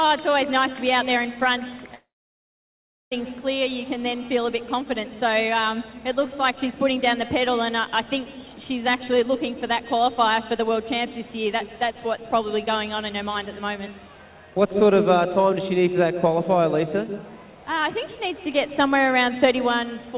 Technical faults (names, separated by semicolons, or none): long network dropout